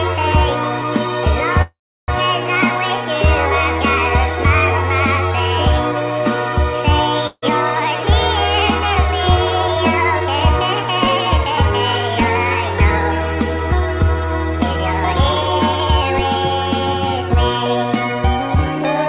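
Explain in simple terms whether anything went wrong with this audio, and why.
Several things went wrong, all typical of audio sent over a phone-style internet call, where nothing above 4 kHz gets through.

From 1.62 to 2.11 s there is a call audio freeze. The last sound carries on briefly as a fading buzz, then about a third of a second of silence follows. The likely cause is packets held up in transit, so the receiver's buffer ran dry. When they arrived, the audio resumed where it paused. Nothing is lost, but a half-second gap was inserted.

From 7.27 to 7.45 s there is a long network dropout. The sound smears into a short fading tail and then goes silent for about 50 ms. When it returns, roughly 150 ms of the original is simply gone. The likely cause is that a run of packets never arrived at all, so unlike the freeze, this part cannot be recovered.

Two stretches show a jitter buffer speed-up, where the receiver trims tiny slices to reduce built-up delay. 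From 10.20 to 11.58 s the audio runs about 5% fast, losing a small amount of time, under a tenth of a second. From 15.12 to 16.59 s it runs about 21% fast, dropping about a third of a second. The pitch stays the same, but this second stretch sounds noticeably hurried.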